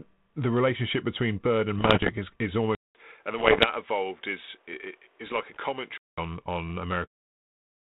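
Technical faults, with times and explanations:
2.75–6.18 s, input switched to a poorer device: just after "is is" there's about 200 ms of silence, then the sound goes boxy, cuts off above 3.8 kHz, drops roughly 5 dB and picks up faint new noise, likely from recording on a narrower-band mic until 6.18 s.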